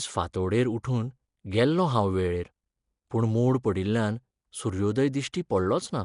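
Throughout, the speech carries a rough, hissy halo with a smeared, underwater quality, likely Nellymoser compression. Its sparse two-bit blocks leave empty bands filled with noise, and a spectrogram shows a hard ceiling near 10.6 kHz, consistent with about 44 kbps. At 3.10 s, just before "पूण मोड पडिल्ल्यान", and again at 5.33 s, there is pre-echo. Quantisation noise spread across a transform block leaks about 11 ms ahead of a sharp attack, softening it with a short hiss that appears on the waveform as a thin smear before the onset.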